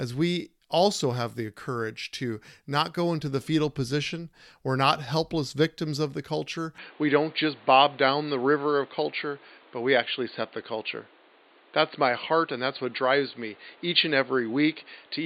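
At 6.78 s, right after "victims of the culture", the recording likely switched its input to a poorer device, and it stays on that device to the end. The new path carries nothing above 4.6 kHz, so from that point the speech turns dull and boxy, losing its crisp consonants. A fresh background noise also appears, sitting about 30 dB beneath the voice. The loudness holds roughly steady, and the change happens with no gap of silence.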